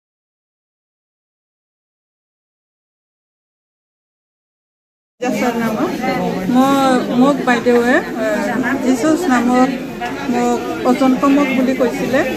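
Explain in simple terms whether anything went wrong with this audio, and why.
Nothing went wrong here; you can listen all the way through without hitting a single glitch, dropout or odd noise.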